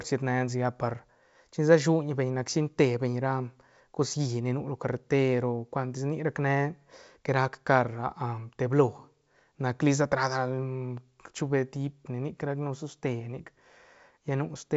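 Nothing stood out on listening to this speech clip, which comes through a G.722 wideband telephone path working as expected.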